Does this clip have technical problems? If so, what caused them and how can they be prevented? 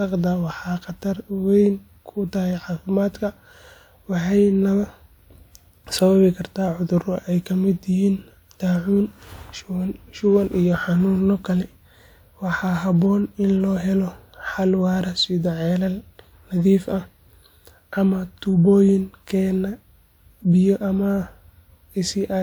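No, nothing technical goes wrong in this recording, so there's no fault to explain and nothing that needs preventing.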